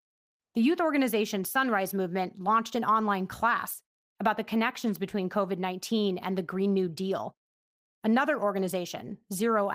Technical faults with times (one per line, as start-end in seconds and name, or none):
none